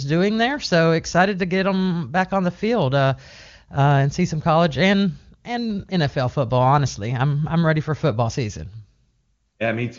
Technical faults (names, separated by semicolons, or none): none